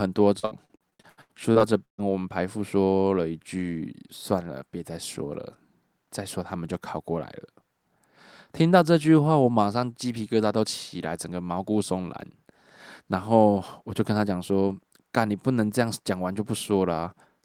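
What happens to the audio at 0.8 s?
That's repeated packet loss from 0.39 to 2.0 s: twelve dropouts, each patched by stretching the last sound, so it turns choppy and robotic.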